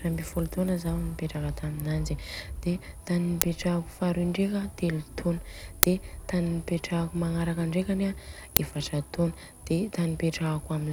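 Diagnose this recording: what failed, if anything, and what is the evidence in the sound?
Loud cracks, each 5 ms long, break into the speech at 3.42, 5.83 and 8.57 s. The driver or buffer stage played an uninitialised buffer: a 5 ms block went out before audio was written to it, so leftover memory was heard as samples.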